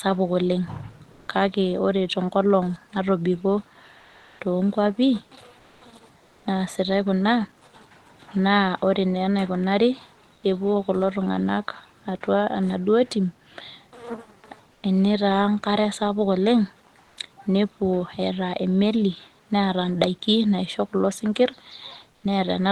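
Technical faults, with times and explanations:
1.11–1.27, 3.99–4.39 (after "tenkolong natobiko"), 5.59–5.81, 6.17–6.45 (before "naasitai kuna"), 10.35–10.43 (before "kulo tung'anak atua enaduo"), 14.73–14.83, 17.01–17.17 and 22.11–22.23 s, comfort noise in place of the background: in speech pauses the real room sound gives way to a flat, featureless hiss, which is likely Opus discontinuous transmission, shifting the level from about 6 dB down to about 6 dB up. On a spectrogram these gaps look like smooth, textureless bands, and the waveform shows an even noise floor.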